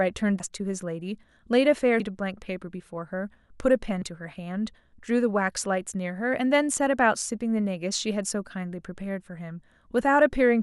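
Speech, with compressed frames skipped at 0.40, 2.00 and 4.02 s. Each time the audio leaps forward by a few frames' worth, around 200, 150 and 100 ms. The frames are 32 ms long.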